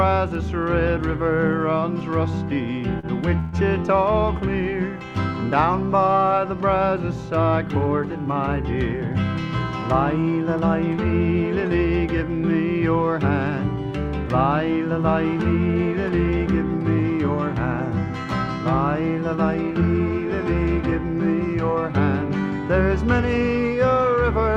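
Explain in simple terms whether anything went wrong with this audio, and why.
Three problems occur. First, a short stall from a late packet at about 2.99 to 3.06 s. A piece of audio arrived late. The player stretched the last sound for about 37 ms to cover the wait. Then it carried on from the same spot, so nothing is lost. It just hangs briefly.

Next comes a call audio freeze from 3.39 to 3.56 s. The sound stops moving forward for about 137 ms. It is filled with a fading buzz or hiss of the last sound, not silence. The likely cause is audio held up on its way. Afterwards it resumes where it stopped, with nothing missing.

Last, a jitter buffer speed-up runs from 15.24 to 20.00 s. Too much audio had piled up waiting to be played. To catch up, the player cut many tiny slices, about a tenth of a second in total. The sound runs about 2% faster at the same pitch.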